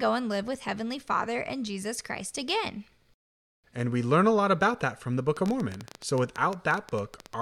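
From 5.37 s to 7.34 s, after "about that from the", a train of clicks ticks unevenly at 11.7 per second, some twenty pulses standing well above the speech. This is likely interference from nearby equipment. They show as sharp waveform spikes and thin vertical spectrogram lines.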